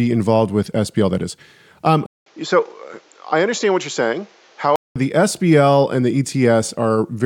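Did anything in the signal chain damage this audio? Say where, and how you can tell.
Yes. An input switched to a poorer device from 2.06 to 4.96 s: the speech drops about 5 dB, loses everything above 7.6 kHz, and gains a new noise floor roughly 35 dB down, after a 200 ms gap. This likely points to a capture-stage change to a narrower-band microphone.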